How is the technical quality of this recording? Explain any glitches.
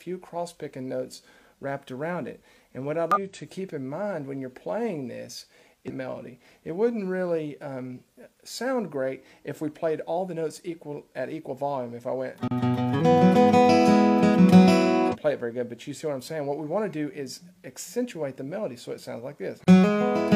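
The recording is marred by two kinds of glitch: five brief disruptions from damaged data in a compressed stream and two short blocks of digital silence.

Damaged data in a compressed stream occurs at 3.12–3.18 s, 5.86–5.91 s, 8.13–8.18 s, 12.96–13.01 s and 15.10–15.16 s, each lasting roughly 50 to 60 ms. Each is a short burst of garbled sound or a break in the audio. Part of the encoded data is corrupt there, so the decoder misreads or rejects those frames, loses its place and has to search for the next valid frame header before playback recovers.

A block of digital silence appears at 12.48–12.51 s, about 33 ms long, and again at 19.64–19.67 s, lasting 30 ms. The audio drops out abruptly and returns without any fade, leaving a short hole. A run of zeros was played in place of the audio, which points to the output buffer not being filled in time or to a calculation producing invalid values.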